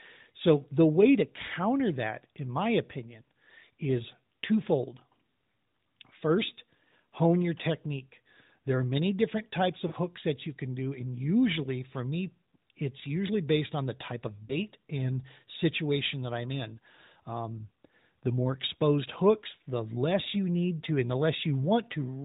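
Lost AMR speech frames at 9.88–9.94 s and 14.47–14.55 s: the decoder repeats its last good settings with falling gain, giving brief smeared dips in the narrowband speech, the first consistent with two 20 ms frames lost, the second with one.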